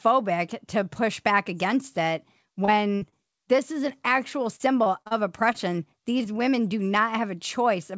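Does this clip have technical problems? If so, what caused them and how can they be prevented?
Yes. Short concealed packet loss occurs at 0.94 s (just before "back against it"), 2.65 s (just after "back against it"), 3.09 s, 5.53 s and 6.18 s (just before "women do"). Each time about 20 ms of audio failed to reach the decoder in time, and the receiver filled the hole by extending the preceding sound. The result is a brief smear or wobble. At 6.18 s the patch also stretches the timing slightly, by roughly 15 ms. Because the audio has no content above 8 kHz, these wobbles sit in a band-limited signal that fits a wideband call codec such as G.722. A larger jitter buffer, or forward error correction on the call, would prevent these small gaps.

A burst of packet loss runs from 2.95 to 3.03 s. About 60 ms went missing in a row, more than a single patch can cover. The receiver kept extending the last sound while fading it, so you hear a held buzz or decaying hiss, and then the audio resumes further along with that stretch gone. 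The short patch at 3.09 s follows right after, which points to a congested or unstable link. Stabilising the network path, or adding redundancy so consecutive packets can be recovered, would prevent it.

Repeated packet loss (robotic sound) covers 4.56 to 5.13 s. Four separate gaps fall in this half-second, the longest 36 ms, with about 140 ms missing in total. Roughly a fifth of the span is synthesised fill. Because each patch follows soon after the last, the sound turns choppy rather than smooth. Fixing the underlying congestion and enabling packet-loss resilience in the codec would prevent this.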